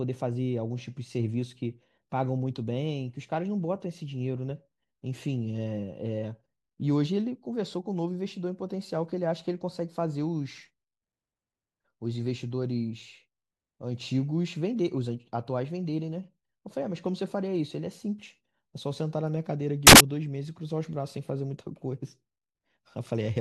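At 19.87 s the speech gives way to a burst of loud broadband noise lasting until 20.00 s, roughly 130 ms. This is samples built from the wrong bytes: for that stretch each sample was reassembled with its bytes misaligned or in swapped order, so the rapidly fluctuating low-order bits landed in the most significant position. The result is near-random large values, heard as a harsh hiss.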